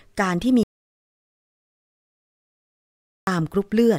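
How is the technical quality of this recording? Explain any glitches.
The recording has one serious glitch. Audio dropout to silence from 0.63 to 3.27 s: the speech stops mid-flow and about 2.64 s becomes silence with no room tone, likely because the input was lost while the recorder kept writing zeros. The speech from that stretch is gone.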